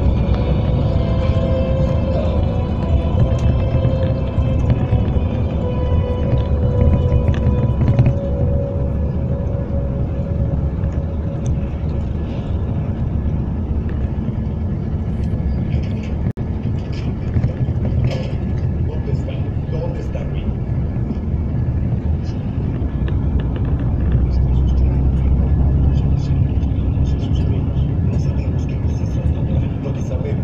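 The audio drops out briefly at 16.31 to 16.37 s, a gap of about 61 ms cut into continuous sound, which then resumes from where it stopped. This is a gap at a join of encoded pieces: separately encoded sections were spliced without trimming each encoder's start delay and final-frame padding.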